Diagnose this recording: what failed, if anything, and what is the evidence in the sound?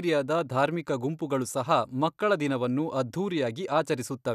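Nothing failed: no stage in the chain leaves an audible fault anywhere in this speech recording.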